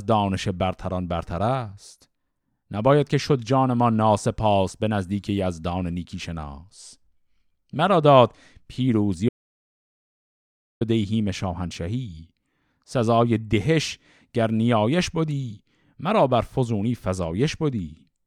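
At 9.29 s the speech cuts out mid-flow. It returns at 10.81 s. That is an audio dropout to silence lasting about 1.52 s. The gap is dead silent, with no room tone underneath. Whatever was said in that stretch is missing. The cause was likely a loss of the input signal, such as a disconnected device, a failed link or a stray mute, while recording carried on and wrote silence in its place.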